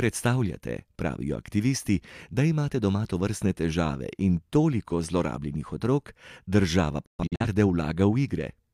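From 7.05 to 7.45 s, a digital broadcast dropout mutes the speech over failed frames, leaving short blank gaps (213 ms in all, longest 128 ms) in waveform and spectrogram.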